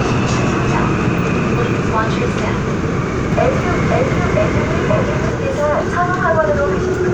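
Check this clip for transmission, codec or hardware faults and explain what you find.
One fault appears in this everyday-sound recording. From 3.3 to 5.3 s, a doubled audio track: a second capture path or misaligned edit likely mixes in a copy about half a second late, equally loud, starting and stopping abruptly.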